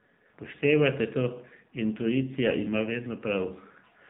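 From start to end the speech carries AMR narrowband mobile codec damage, plainly audible: nothing above 4 kHz, plus a buzzy, synthetic edge that fits a low mode near 7.4 kbps. Simple band-limiting would only muffle; the vocal-tract model's pulse excitation adds this artificial rasp.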